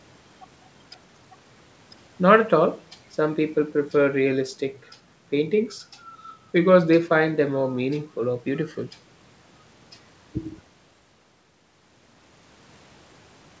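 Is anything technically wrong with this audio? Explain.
No, nothing technically wrong can be heard here.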